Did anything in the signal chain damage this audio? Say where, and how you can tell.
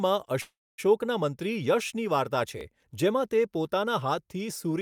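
Yes: a call audio freeze at 0.41–0.80 s, likely network packets stalling and draining the jitter buffer. The last sound fades into silence, then speech resumes intact, 367 ms late.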